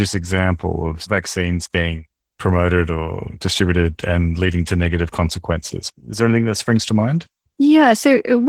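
Throughout the speech, Opus voice compression is plainly audible. The lower band sounds hoarse and faintly robotic from coarse linear-prediction coding, and the top above 8 kHz fits hybrid coding at about 16 kbps. Unlike a simple low-pass, the treble remains.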